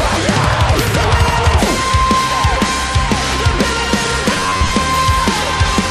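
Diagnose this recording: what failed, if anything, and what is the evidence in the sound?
Robotic sound from repeated short buffers, 4.33 to 4.70 s, at the driver or buffer stage. The audio becomes a rigid metallic buzz near 94 Hz, with roughly half of it replaced, likely by a segment of about 10.7 ms replayed because new audio arrived too slowly.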